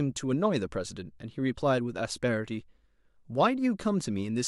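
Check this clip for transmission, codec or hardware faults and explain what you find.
I checked this clip and found nothing to explain: no faults turn up anywhere in it.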